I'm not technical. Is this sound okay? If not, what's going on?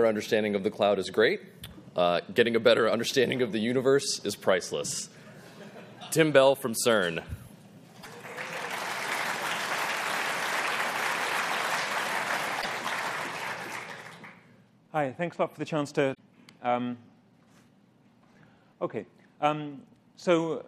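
No. At 7.98 to 8.06, 12.58 to 12.66 and 16.11 to 16.19 seconds you hear a brief chirp, squawk, click or short hole. This is damaged data in a compressed stream: bits of the file are broken, so the player garbles them briefly.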